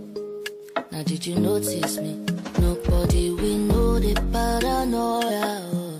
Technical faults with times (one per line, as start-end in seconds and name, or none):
3.04-3.09 compressed frames skipped
5.27-5.31 compressed frames skipped